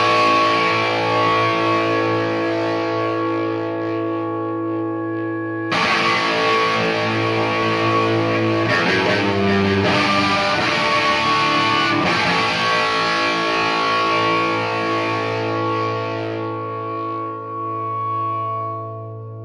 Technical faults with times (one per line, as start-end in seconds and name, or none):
7.62-10.06 doubled audio track